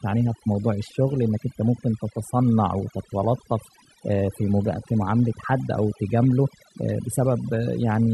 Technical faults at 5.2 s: overdone noise removal; drift correction step

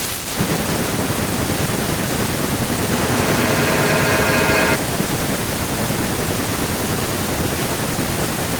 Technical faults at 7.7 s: none

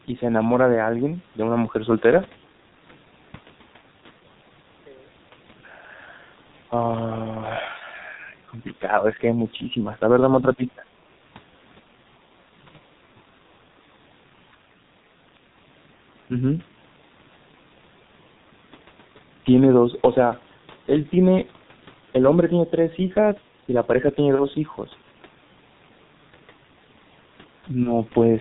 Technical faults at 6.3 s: G.723.1 codec

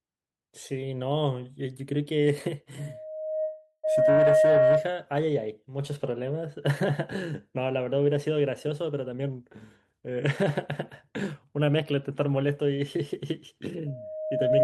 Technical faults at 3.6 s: loudspeaker feedback squeal; call audio freeze

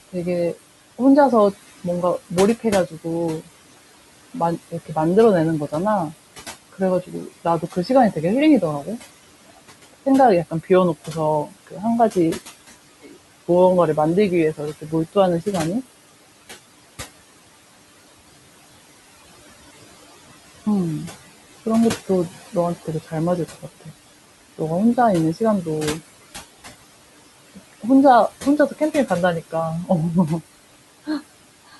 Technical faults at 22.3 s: noise suppressor artifacts; speech cut by the noise suppressor

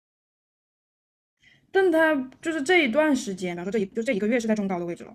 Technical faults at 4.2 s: time-stretched section

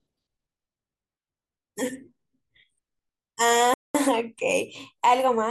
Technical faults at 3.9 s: playback stall

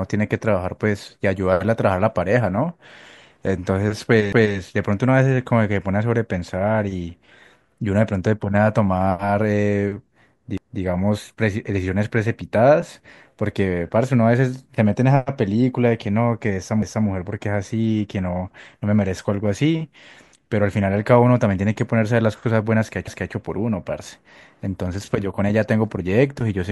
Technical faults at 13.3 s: none

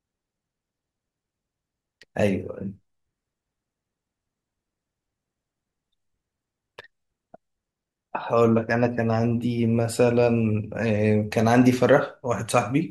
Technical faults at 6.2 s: none

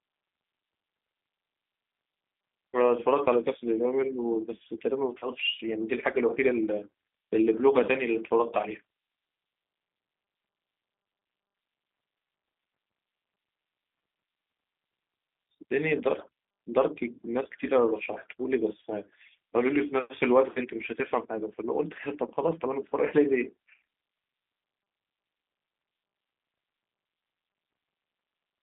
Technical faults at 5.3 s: G.729 codec; VoIP packet loss concealed by the speech codec

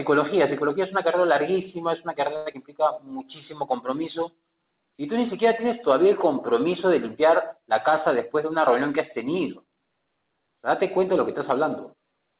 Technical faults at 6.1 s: none

